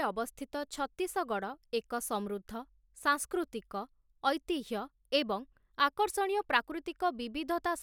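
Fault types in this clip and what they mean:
Nothing here calls for a fault entry, since no technical problems turn up anywhere in the speech.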